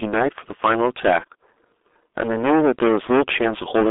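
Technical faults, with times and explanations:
Throughout: hard clipping. The speech is driven about 19 dB past full scale, flattening roughly a third of the waveform, so every loud syllable turns into harsh fuzz.
Throughout: G.723.1 codec. Low-rate telephony coding near 6.3 kbit/s confines the speech to about 250 Hz–3.6 kHz, leaving it muffled and hoarse with smeared consonants.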